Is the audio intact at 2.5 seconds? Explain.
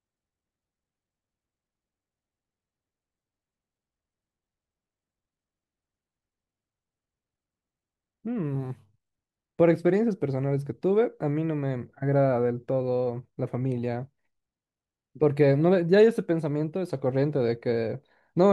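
Yes, the speech at 2.5 seconds is intact, with no dropout, click, distortion or other technical fault at that point.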